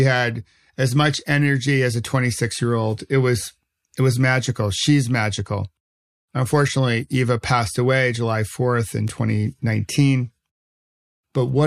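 At 9.08 s a bit error spike: a flipped bit across three consecutive samples jumps to about -17 dBFS, producing one sharp broadband tick unrelated to the speech.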